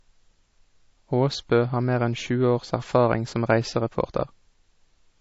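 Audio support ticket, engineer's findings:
Speech throughout: treble absent above 7.6 kHz, watery, swirly texture, smeared consonant attacks. Likely MP3 compression. Encoder short of bits, fixed high cut, weak frequency lines dropping in and out frame to frame. Damage fits roughly 32 kbps.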